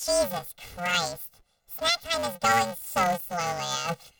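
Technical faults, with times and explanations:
Throughout, planar audio read as interleaved: the speech carries a robotic buzz at about 345 Hz, which fits blocks of 128 samples, each about 2.9 ms long. In each block, all left samples come before all right ones, but they were taken as alternating pairs, so each block plays twice at double speed, first left, then right. Because the blocks are this short, their repetition rate becomes an audible buzz, and there is no clear octave shift. The overall pace stays correct.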